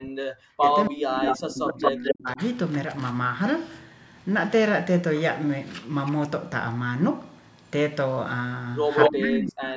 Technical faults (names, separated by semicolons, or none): speech suppressed in double talk; echo leak